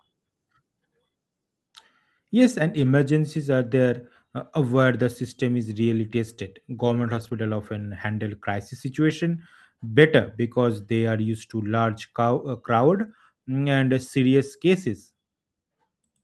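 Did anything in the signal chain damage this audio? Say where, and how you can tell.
Yes, at the network stage: lost packet rebuilt from error correction at 2.73–2.87, 6.79–7.33 (before "often handle crisis") and 9.09–9.11 s. Rough, noisy low-bitrate copies fill these spans with no gap or smeared concealment.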